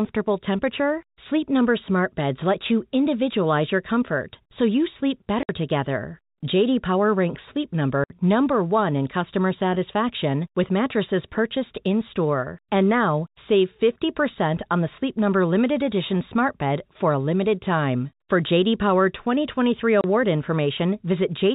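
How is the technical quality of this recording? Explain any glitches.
The recording has three brief dropouts, heard against a telephone-band sound whose G.711 coding cuts everything above 4 kHz.

Packet loss filled with silence occurs at 5.43–5.49 s, just after "comfort so you sleep", at 8.04–8.10 s, and at 20.01–20.04 s. Stretches of audio never arrived, and the receiver played dead silence in their place. The 60, 60 and 30 ms gaps fit a 30 ms packet size. Each hole cuts the sound abruptly, with hard edges. A waveform shows flat, near-silent slots, and a spectrogram shows blank vertical bands.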